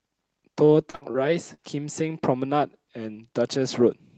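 Between 0.65 and 1.16 s, packets repeatedly failed to arrive in time, producing repeated packet loss (robotic sound). The receiver hit four separate gaps totalling about 140 ms, the longest 59 ms, and patched each by extending the preceding sound. Roughly 29% of that half-second is synthesized fill. The speech turns choppy there, and fragments drop out because the real audio never came through.

At 1.54 to 1.60 s, a single 40 ms run of audio went missing: a short concealed packet loss. The decoder bridged the hole by carrying the last sound forward and then crossfading back into the real signal. It is heard as a brief smear or wobble in the speech rather than a clean gap. The whole clip also shows the call codec's band limit, with nothing above about 8 kHz.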